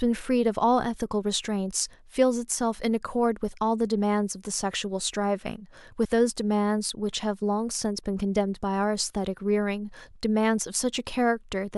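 Damaged data in a compressed stream hits at 6.04 s: corrupted frames throw the decoder out of sync, producing a brief disturbance in the speech.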